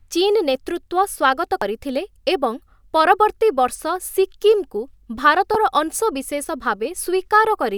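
At 1.62 s and again at 5.54 s the speech is broken by damaged data in the compressed stream: corrupted bytes make the decoder misread the affected frames and lose sync until it finds the next frame header. Each event is a brief chirp or blip.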